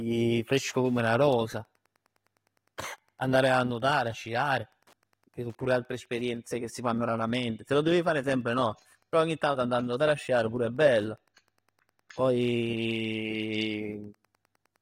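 Speech recording with Wi-Fi interference throughout: faint ticks every 102.4 ms, around 45 dB down, as the circuit rectifies a nearby radio's beacon. That pace is far slower than a phone's 217 Hz buzz.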